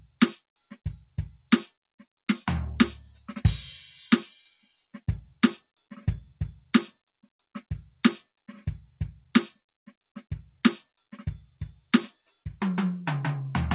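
Sound cut by the noise suppressor occurs at 0.39–0.78, 1.71–2.25, 4.51–5.0, 5.61–5.91, 6.92–7.49, 9.53–10.08 and 12.13–12.42 s. Each time the suppressor mistakes sustained music for noise and pulls it down by about 12 to 18 dB, so held tones sag and decays are clipped short. The band stops at 4 kHz, consistent with G.711 mu-law on the call path.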